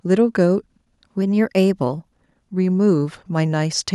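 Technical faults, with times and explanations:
1.22 to 2.12 s, drift correction step: software keeping two clocks in line has likely changed the playback rate in a single jump to refill or drain its buffer, so the speech runs about 5.7% fast for just under a second before snapping back. Speed and pitch move together, so the voice rises by about 96 cents, close to a semitone, and the pace hurries. The passage sounds abruptly detuned, then drops back to its normal pitch.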